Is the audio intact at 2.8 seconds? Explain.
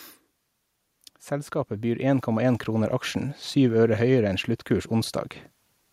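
No, 2.8 seconds sits inside an automatic gain rise running from about 1.29 to 2.99 s, just before "aksjen syv øre". The AGC decided the input was too quiet and eased its gain up by about 7 dB, so the speech and the background noise swell together over that stretch.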